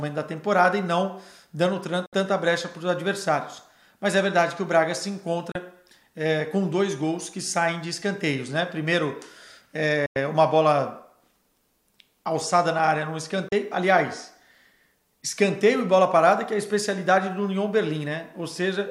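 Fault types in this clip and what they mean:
Digital broadcast dropout: the receiver loses the signal or rejects corrupted frames and mutes until clean frames return, so the sound simply vanishes. Here there are four brief holes, at 2.06–2.13 s, 5.52 s, 10.06–10.16 s and 13.48 s. They last 64, 32, 96 and 32 ms, lengths that fit whole 32 ms frames, and each edge is a quick 3 ms fade. Unlike a click, or concealment that smears or repeats the sound, these gaps are true silence, and the sound that should fill them never comes back.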